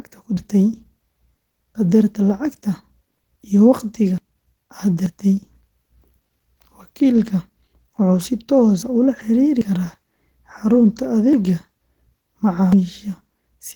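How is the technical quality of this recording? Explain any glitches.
The recording has two problems: steady low-bitrate voice compression throughout and six abrupt skips.

Opus voice compression runs for the whole clip. The encoder is in hybrid mode, with a linear-prediction coder handling the lower band and a transform layer above 8 kHz. The bitrate is starved, which fits roughly 16 kbps, so the excitation is coded coarsely. The band stays full, reaching 20 kHz, but the speech comes out plainly hoarse and slightly robotic.

The dropped buffers (overruns) are at 0.37, 4.18, 5.06, 8.82, 11.33 and 12.73 s. Each is likely the program failing to collect samples before the hardware overwrote them, so a chunk is lost and the two sides are spliced together. You hear a sudden jump forward rather than silence. The losses at 0.37 and 12.73 s are largest, around 150 ms. The one at 4.18 s is about 100 ms, and the rest are about 50 ms.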